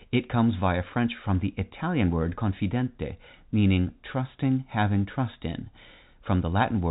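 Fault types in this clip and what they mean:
Nothing stood out on listening to this speech clip, which carries the narrow, telephone-band sound of G.711 coding with nothing above about 3.8 kHz.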